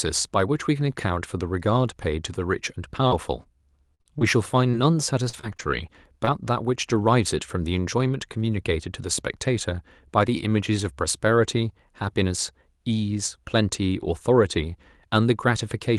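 From 3.07 to 6.89 s, the speech has scattered short gaps. About ten small holes appear, none longer than roughly 50 ms. The receiver bridged them by stretching the last sound, rebuilding 240 ms of the 280 ms lost. Brief ticks and smeared hiccups result.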